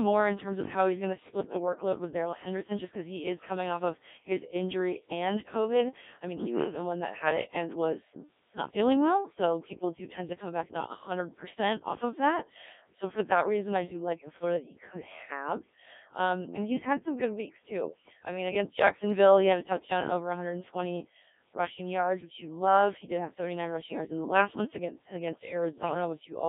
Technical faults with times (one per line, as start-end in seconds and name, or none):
0.00-26.48 Codec 2 vocoder
0.57-0.62 bit errors on digital voice radio
25.77-25.94 bit errors on digital voice radio